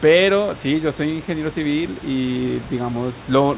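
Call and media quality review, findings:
No faults found in this speech clip. The call path band-limits everything to 4 kHz, consistent with G.711 mu-law at 64 kbps, and room noise sits about 22 dB below the speech.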